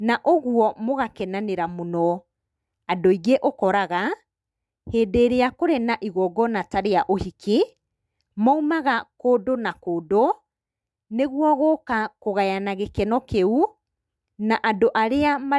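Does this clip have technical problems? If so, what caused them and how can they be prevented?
No, there's nothing technically wrong with this speech recording, so there's no cause to track down and nothing to prevent.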